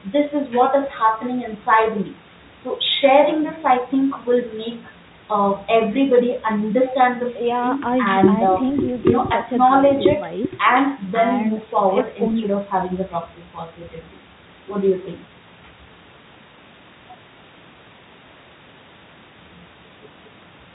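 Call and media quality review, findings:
No faults found.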